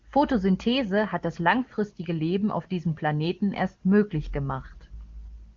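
Nothing stood out on listening; the speech comes through the AMR wideband (HD Voice) codec at its top rate with its band ending near 7.2 kHz, and no moment draws attention to itself.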